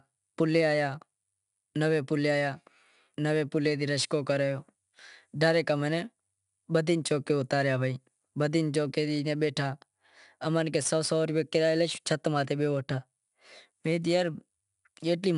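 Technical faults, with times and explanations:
throughout: 4-bit ADPCM compression. Coding each sample as a coarse 4-bit step from a prediction leaves a plainly audible gritty hiss that swells with loud speech. A spectrogram shows broadband haze tracking signal level and a hard ceiling at 10.6 kHz, which fits a rate around 89 kbps.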